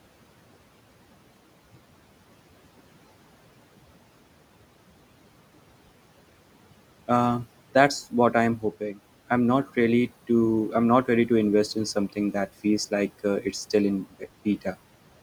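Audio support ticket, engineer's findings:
Noise suppressor artifacts, whole clip: suppressor attenuating bands it classifies as steady noise by about 18 dB, frame by frame. Room noise (about 18 dB below speech) pumps between phrases.

Speech cut by the noise suppressor, 8.58–9.01 s (after "that's what I'm") and 14.05–14.24 s: speech misread as noise, dips of about 18–19 dB, roughly 0.2 s and 0.1 s affected. Speech sounds swallowed.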